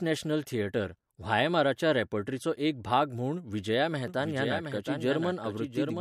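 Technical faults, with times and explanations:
4.08 s to end: doubled audio track. A second full-band copy of the speech enters abruptly and runs about 0.7 s behind the original, roughly 5 dB quieter, with no decay or room colour. This is likely a second capture through a slower path being mixed back in.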